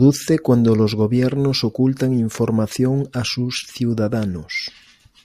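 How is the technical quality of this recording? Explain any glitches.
No glitches or faults heard.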